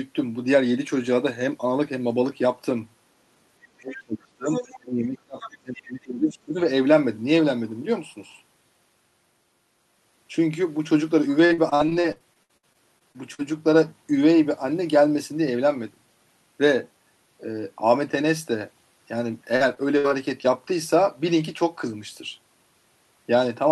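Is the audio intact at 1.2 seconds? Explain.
Yes, at 1.2 seconds the speech plays through intact, with no dropout, click or other fault at that moment.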